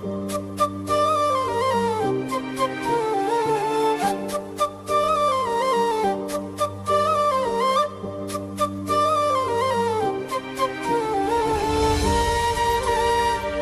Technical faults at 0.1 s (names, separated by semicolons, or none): none